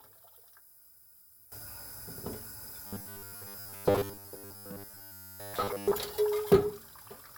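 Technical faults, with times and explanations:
0.00 to 1.52 s, one channel inverted: the sound drops by about 15 dB and turns faint, as if most of it has been scooped out. That's likely one stereo channel with its polarity flipped. When the two sides are summed to mono, everything they share cancels, and what survives is only the small difference between them, a faint residue of the real sound rather than the full thing.
2.87 to 5.93 s, robotic sound from repeated short buffers: the sound takes on a rigid, metallic buzz pitched at 100 Hz that loosely tracks the underlying audio but loses its natural texture. This is likely fresh audio arriving too slowly, with the playback filling the gaps by looping the last chunk, here about 10 ms long, which fits that 100 Hz pitch. Roughly two thirds or more of the stretch is these repeats, so much of the real audio is simply skipped.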